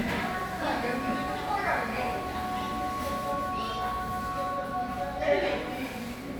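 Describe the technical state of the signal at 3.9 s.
At 3.9 s the audio is intact, with no dropout, distortion, glitch or other technical fault at that moment.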